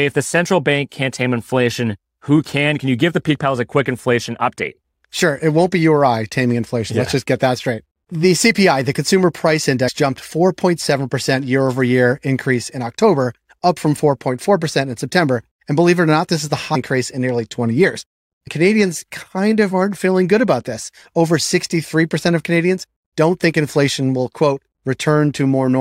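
At 9.87 to 9.89 s there is a brief break-up. This is damaged data in a compressed stream. Some of the encoded bytes there are corrupt, so the decoder misreads the frame and loses its place until it finds the next valid header. A second blip comes at 16.74 s, lasting under 20 ms. A third follows at 18.46 to 18.48 s. Each is a short break.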